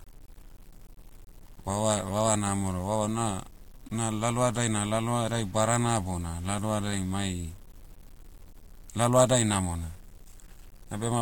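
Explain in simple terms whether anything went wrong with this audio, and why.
Grainy, gritty distortion clings to the speech through the whole clip, worst in quiet moments. It's likely low bit depth without dither, about 8 bits, crudely truncated.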